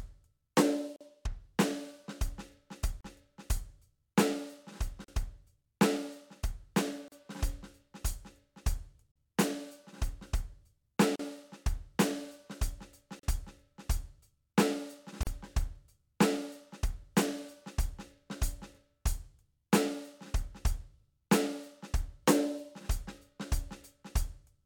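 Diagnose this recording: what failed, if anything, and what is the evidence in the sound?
The codec stage failed: the music was encoded in roughly 2 s pieces and joined untrimmed, leaving a gap at a join of encoded pieces. Silences break the music at 0.96 s (45 ms), then 38 ms at 3.01, 5.04, 7.08, 9.12, 11.16, 13.19 and 15.23 s.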